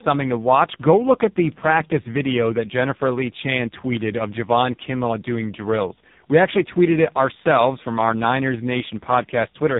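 Throughout the speech, the sound shows tandem speech coding: it passed through two speech coders in a row, with each re-encoding the already degraded output of the one before. The character fits an ADPCM stage such as G.726 followed by a low-rate AMR-NB stage near 5.9 kbit/s. Nothing is present above 3.8 kHz. The errors compound, so the speech sounds rougher, more muffled and more warbly than a single coding pass would leave it.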